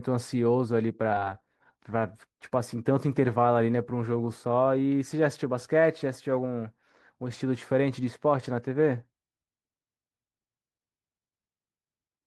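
At 1.11 to 1.13 s the speech jumps abruptly forward, with no silence covering the join, and roughly 0.4 s of material is simply gone. This is a skip ahead: a stretch of audio was discarded while later audio was already queued, so playback resumed directly from the newer material.

From 1.21 to 3.38 s the speech sounds rushed, running at about 109% of normal speed while keeping its pitch. This is a jitter buffer speed-up: with excess audio queued, the receiver repeatedly trimmed short pitch-period slices, removing about a fifth of a second in total.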